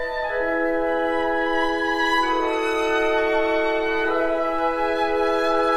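Nothing in this audio is technically wrong.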